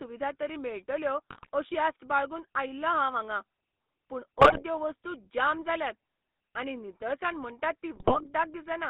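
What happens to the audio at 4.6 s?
GSM bit errors run from 4.38 to 4.63 s, just before "वस्तू जाम जाल्यात". Corrupted filter, pitch and gain values make squawks and gargling pops, seen as level spikes and smeared, misplaced spectral bands. Underneath, the GSM full-rate codec's buzzy, gravelly roughness persists, with the spectrogram showing nothing outside roughly 200 Hz to 3.6 kHz.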